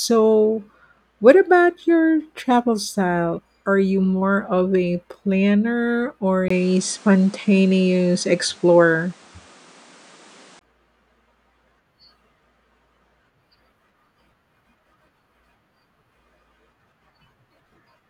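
From 6.48 s to 10.61 s the speech turns duller, with nothing above 10.5 kHz, a level shift of roughly 5 dB, a new noise floor well below the voice, and a 20 ms gap at the change. The input likely switched to a poorer device.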